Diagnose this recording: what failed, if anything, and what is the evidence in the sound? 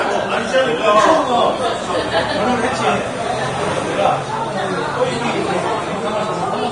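Codec stage: likely heavy Vorbis compression, consistent with about 31 kbps. Throughout, nothing survives above 10.6 kHz, and coarsely quantised treble becomes hissy, grainy noise.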